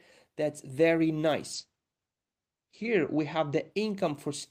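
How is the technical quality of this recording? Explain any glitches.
The speech is affected by one glitch, a call bitrate drop. From 1.54 s to 3.77 s the speech turns muffled and rough and watery, with the top end gone above about 8 kHz instead of reaching 20 kHz, at its dullest for about 1.34 s. The call's bandwidth estimate fell and the encoder was told to spend far fewer bits, which fits a drop from 32 kbps to 10 kbps. It then coded more coarsely and discarded the high frequencies until the rate recovered.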